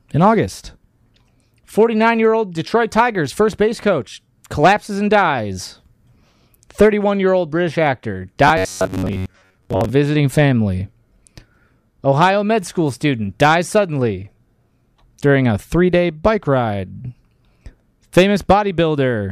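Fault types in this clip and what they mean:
Robotic sound from repeated short buffers: from 8.48 to 9.90 s the speech turns into a hard, metallic buzz near 94 Hz that still tracks the syllables. The likely cause is audio arriving too slowly, so short chunks of about 11 ms get replayed, with roughly half the material being repeats. A waveform would show identical blocks tiling every 10.7 ms, and a spectrogram would show rigid horizontal harmonics spaced at 94 Hz.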